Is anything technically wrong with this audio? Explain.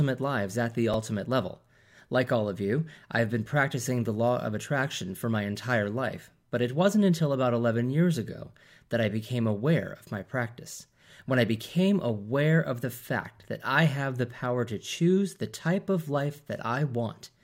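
Yes. Just after "lives at the", at 0.93 s, there's chunks out of order: a 5.3 ms slice plays one chunk late, making a tiny jumbled blip.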